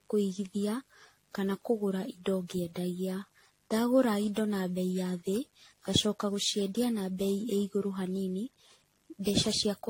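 Mains buzz runs through the whole clip. Sharp switching spikes from the power supply, arriving twice per cycle of a 50 Hz mains, have leaked into the signal path. Their harmonics stack up from 50 Hz into the kilohertz range. The result is a steady, raspy buzz sitting roughly 40 dB below the speech. It is quiet but constant.

From start to finish the speech sounds swirly, smeared and hollow, with nothing above 16.6 kHz. Consonant attacks are blurred and softened. The likely cause is generation loss: the audio was decoded and re-encoded with a lossy codec over many passes, on the order of ten. Each pass quantised afresh on a shifted frame grid, piling up noise. The character fits AAC-LC at around 64 kbit/s, yet the damage is heavier than a single pass would leave.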